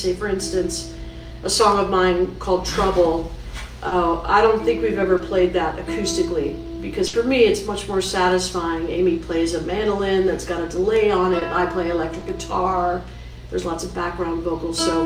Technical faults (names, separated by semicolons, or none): short concealed packet loss; burst of packet loss